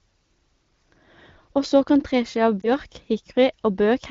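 At 2.61 to 2.69 s, just after "så kan treski av", the speech briefly dips and wobbles, then recovers with a thin, rough edge for a moment. This is a lost AMR speech frame: a radio error corrupted the frame's checksum, so the decoder filled the gap by repeating the previous pitch and vocal tract settings at reduced gain. The short disturbance fits a single 20 ms frame. The surrounding AMR wideband (HD Voice) coding sounds clear with light codec colouring, which fits a rate near 16 kbit/s.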